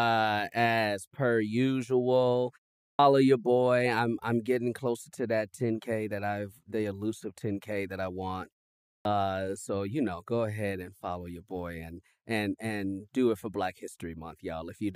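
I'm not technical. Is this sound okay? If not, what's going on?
No. The playback device goes to sleep during short silences and takes a moment to wake up again, so the first fraction of a second of sound after each pause is lost. This is a clipped start after a pause. At 2.93 s, after a pause of about 0.4 s following "as per usual", roughly 60 ms is swallowed, so "your boy I'm I'm" starts abruptly. The same happens at 8.99 s after "that I want": "so you know go" begins cut off.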